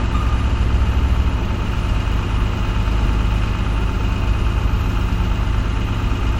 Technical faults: compressed frames skipped

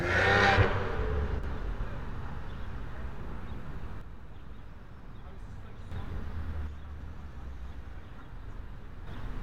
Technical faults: one channel drops out

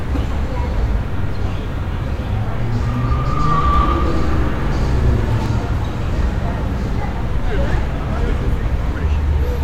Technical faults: doubled audio track

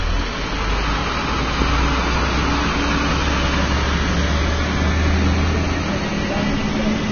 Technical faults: Vorbis compression; loud pop

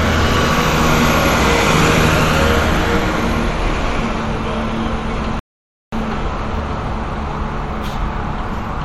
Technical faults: rebuffering stall

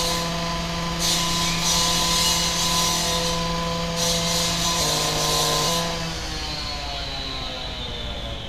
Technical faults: block size mismatch (padded)

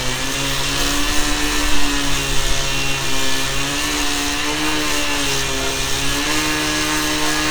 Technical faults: periodic USB or driver dropouts

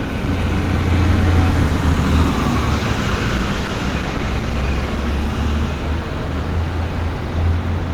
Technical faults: call bitrate drop

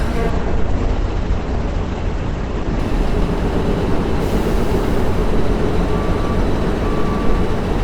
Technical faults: call bitrate drop

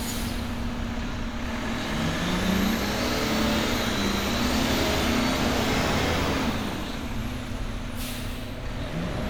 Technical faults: none

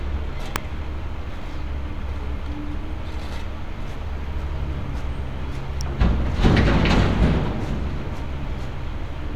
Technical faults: electrical switching spike

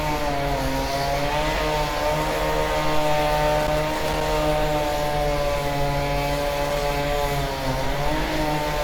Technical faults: loose connector crackle

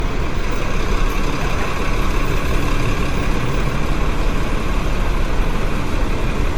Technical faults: generation loss

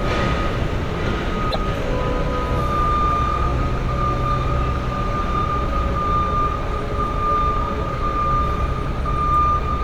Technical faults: broken MP3 bit reservoir

